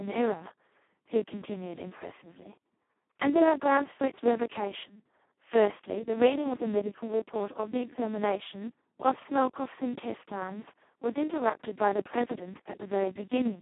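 Speex codec damage runs through the entire clip, from start to finish. The speech is squeezed into a phone-like band of roughly 150 Hz to 3.4 kHz, with nothing above 3.8 kHz. The damage is heavy, which points to the codec's lowest setting, around 2 kbps. At that rate the excitation signal gets almost no bits, so the voice comes out hoarse, buzzy and robotic, close to a vocoder.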